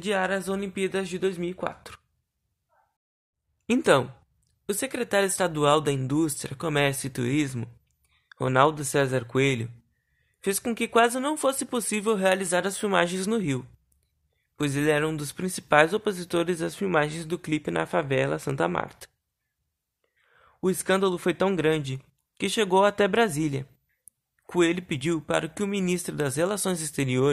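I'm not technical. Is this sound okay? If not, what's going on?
Yes, nothing in this recording points to a technical fault, so there is nothing here to fix.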